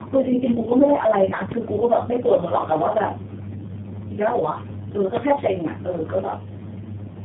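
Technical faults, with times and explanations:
Throughout: tandem speech coding. The speech sounds rough, muffled and warbly, with nothing above 3.7 kHz, which points to about three low-rate speech codecs in a row, each re-coding the previous one's errors. One codec alone would sound cleaner, with less stacked warble.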